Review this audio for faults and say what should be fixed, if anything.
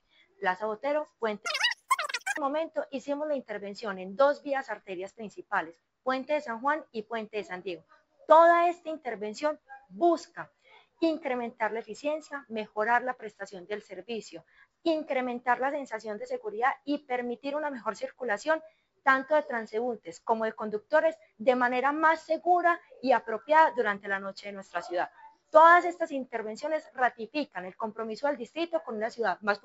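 Wrong sample rate from 1.46 to 2.37 s: the sound runs three times too fast and about 19 semitones high, which fits 16 kHz material played at 48 kHz without conversion. To prevent it, check each source's sample rate and resample to the output rate before playback.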